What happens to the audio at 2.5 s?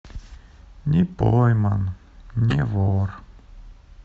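Right around 2.50 to 2.54 s you get a corrupt frame decoded. A few consecutive compressed frames in the speech arrived with flipped bits, and the decoder played them anyway. The misread gains and codes put energy in the wrong frequency bands for the length of those damaged frames, so what you hear is a short, harsh chirpy burst, fairly hot at around -10 dBFS, lasting roughly 30 milliseconds before things snap back.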